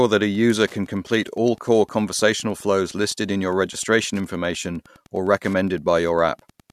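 Wi-Fi interference runs under the speech for the whole clip: a Wi-Fi radio near the audio circuit has its beacon bursts rectified into the audio path, giving a steady tick every 102.4 ms, about ten per second, roughly 35 dB below the speech.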